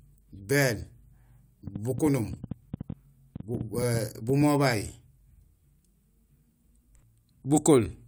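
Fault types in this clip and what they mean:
Train of clicks: Likely interference or a faulty connection or power supply injecting repeated pulses, heard as around twenty similar ticks from 1.67 to 4.43 s, arriving unevenly at about 8 per second and rising a few dB above the speech, including in pauses.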